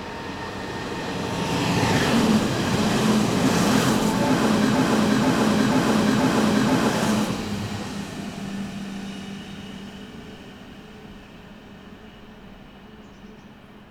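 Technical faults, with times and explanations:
4.75–6.89 s, broken-record loop: a 0.48 s fragment repeats exactly, back to back, four times, so the sound sticks in place and the audio due in that span is lost. Likely the player or stream stalled and kept resending its last held fragment.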